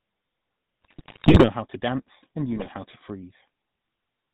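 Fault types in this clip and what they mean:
GSM full-rate codec: The speech runs through the old GSM full-rate codec the whole way, which fits a 13 kbps stream. It fits a vocal-tract filter to each stretch and rebuilds the excitation from a coarse, regularly spaced pulse grid, so the voice comes out buzzy and gravelly. The damage is plainly audible here. Nothing above 4 kHz survives, so sibilants and airiness are gone and the sound is dull and boxy.
GSM bit errors: Two bursts sound like corrupted frames on a weak GSM link, where flipped bits reach the decoder and scramble the filter, pitch and gain values it rebuilds from. From 0.82 to 1.49 s the speech breaks up into squawky, gargling mush for most of that stretch, which points to roughly 5% of bits being hit. A shorter burst at 2.56 to 2.69 s gives a quick pop and gargle.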